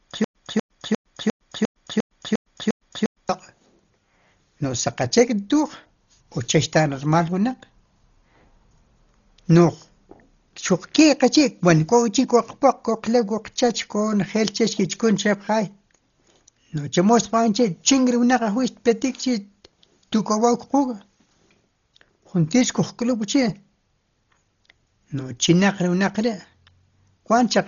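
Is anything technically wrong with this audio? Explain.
Yes, there are two problems.

From the very start, already under way when the clip opens, until about 3.29 s there is a stutter with silent gaps. A 243 ms burst of speech repeats nine times, each followed by about 109 ms of digital silence, so it recurs every 352 ms. The likely cause is a stalled player replaying its last fragment at each retry and then running dry, which loses the speech that should have filled that time. On a waveform this shows as identical blocks separated by flat lines. A spectrogram shows the same pattern repeated in vertical stripes with blank gaps.

Throughout the clip there is heavy Dolby Digital compression damage. Nothing is present above 6.9 kHz, so the speech sounds dull and muffled, with a rough, fluttering noise clinging to voiced sounds. This likely comes from an AC-3 style encoder at a very low bitrate, around 32 kbps. 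The encoder narrows the band and leaves many frequency lines without mantissa bits, and the decoder fills those lines with dither noise. A spectrogram shows a hard ceiling at 6.9 kHz and grainy, speckled energy around the harmonics.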